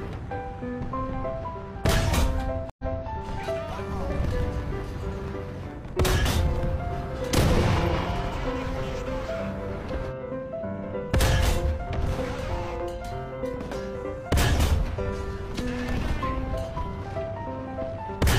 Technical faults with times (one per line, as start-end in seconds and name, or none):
2.70-3.07 stream reconnect
4.01-5.90 train of clicks